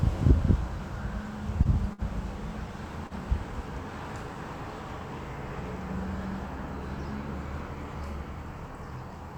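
At 1.63, 1.93 and 3.07 s there's a short stall from a late packet: the jitter buffer ran dry, so the sound holds for about 15, 54, then 31 ms before carrying on unchanged.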